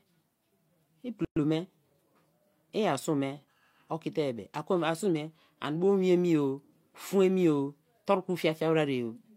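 At 1.25 s the speech stops dead for about 116 ms, until 1.36 s, a gap at a join of encoded pieces. Two separately encoded segments were butted together without trimming, so the encoder's start-up delay and the padded final frame both survive as silence. The edges are abrupt but smeared by the codec, and the speech resumes exactly where it stopped, with nothing skipped. That separates it from a packet-loss dropout, which loses material.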